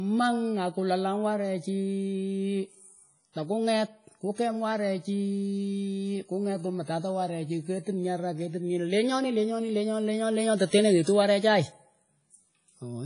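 A speech recording run throughout through heavy, likely WMA compression, consistent with about 24 kbps, leaving nothing above 10.1 kHz and a ringing, washy hiss that breathes with the voice.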